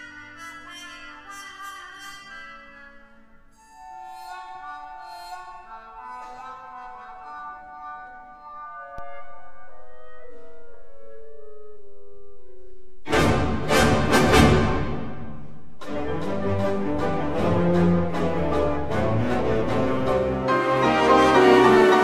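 At 8.98 s a DC step occurs: the waveform's zero line jumps to an offset of about -28 dBFS, as if a converter had recalibrated or an offset input had been switched in. The offset holds until 20.12 s and then returns. Each step is heard as a low thump while the sound carries on unchanged. On the waveform the trace sits visibly off-centre between those times, and a spectrogram shows a brief broadband flash at each edge.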